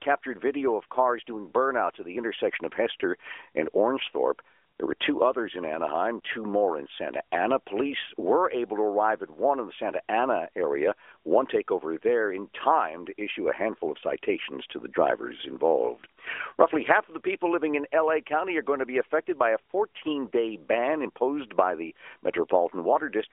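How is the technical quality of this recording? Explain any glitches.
No glitches to speak of here: the speech comes over an AMR narrowband mobile line, so there's nothing above about 3.7 kHz, and that's just how the phone path sounds rather than anything going wrong.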